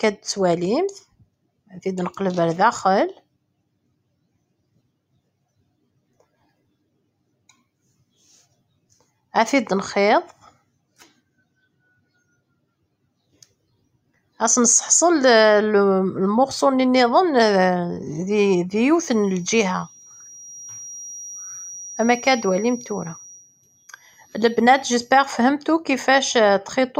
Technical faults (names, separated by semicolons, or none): sound cut by the noise suppressor; feedback whistle